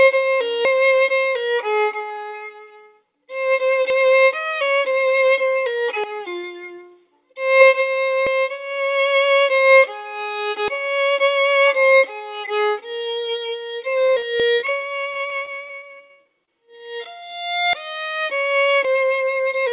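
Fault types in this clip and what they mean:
dropped buffer (overrun): The audio likely wasn't collected before the hardware overwrote it, so about a tenth of a second is lost and the edges join directly. It is heard as a jump in the sound at 0.65, 3.90, 8.27, 14.40 and 17.73 s.
short concealed packet loss: Brief stretches of the call arrived too late for the decoder, which covered each gap by extending the preceding sound and then blending back. Three gaps of 20, 20 and 40 ms between 14.06 and 14.24 s cause a quick smear and wobble.
repeated packet loss (robotic sound): From 14.60 to 16.49 s, packets kept going missing, leaving 21 gaps and about half a second lost. The longest gap was 62 ms. Patching covered about a quarter of the span, which makes the sound choppy.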